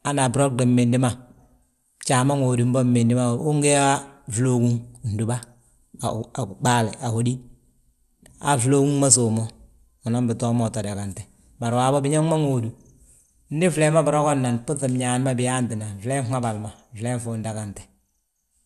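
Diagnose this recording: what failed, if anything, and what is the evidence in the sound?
The codec stage failed, most likely through MP2 compression. Throughout the speech the sound is dull, with a gurgling, grainy distortion, and nothing survives above 12.2 kHz. Short of bits, the encoder shuts off its upper sub-bands entirely and quantises the remaining ones coarsely, a plainly audible level of damage that fits a rate around 80 kbps. A spectrogram would show a hard ceiling at 12.2 kHz and blocky upper bands flickering on and off.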